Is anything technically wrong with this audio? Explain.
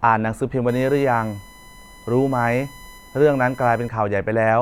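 Yes. From 0.69 s to 3.89 s there is USB whine. The USB bus draws current in 1 ms frames, and that current leaks into the audio path through power or ground. The result is a steady, fixed-pitch whine built on 1 kHz and loudest at its 2 kHz harmonic, sitting some 25 dB below the speech.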